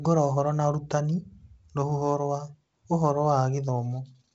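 Nothing stood out on listening to this speech, which comes through G.722 wideband telephone coding at 56 kbit/s with its content ending near 7.7 kHz.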